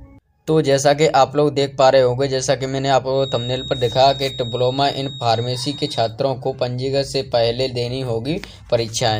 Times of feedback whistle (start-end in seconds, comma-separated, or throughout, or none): 3.08-6.16